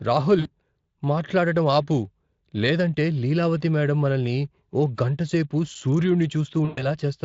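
VoIP packet loss concealed by the speech codec is audible in this speech recording at 0.39 to 0.48 s and again at 6.65 to 6.95 s. About 60 ms and then 120 ms of audio went missing, which fits lost 20 ms frames. The decoder filled each gap by repeating its last pitch and spectral shape at falling gain, so the speech smears into a fading buzz or coloured noise and stays weakened briefly after the stream resumes. The underlying Speex coding is only lightly coloured.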